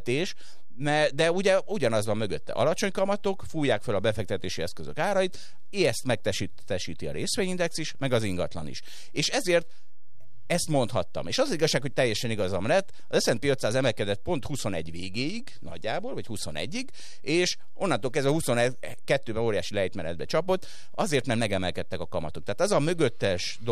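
A DC offset runs through the whole speech clip. The entire waveform sits shifted away from zero by a constant amount, at about -30 dBFS. Nothing about it is heard directly. It shows up instead as steady energy at the very bottom of the spectrum, at zero frequency. That fixed shift eats into headroom, because peaks on one side reach full scale sooner. It stays present from start to finish.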